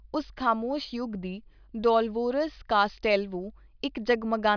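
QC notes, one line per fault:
No faults heard.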